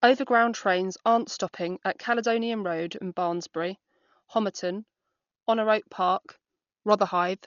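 Speech that has likely been through Dolby Digital compression at a starved bitrate, which fits about 40 kbps: the encoder has cut the band so nothing survives above 6.9 kHz, and the damage is heavy throughout, leaving the sound dull with rough, fluttering noise around tonal parts.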